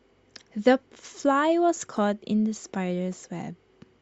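At 1.96 s a corrupt frame decoded produces a brief chirp, squeak, blip or burst of noise in the speech: flipped bits in one compressed frame were played anyway, misplacing energy across frequencies. A spectrogram shows a short vertical smear of stray energy, peaking around -30 dBFS.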